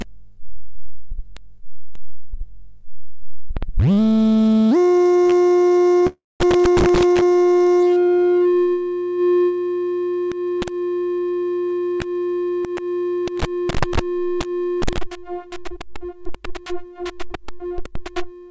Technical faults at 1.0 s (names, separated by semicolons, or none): none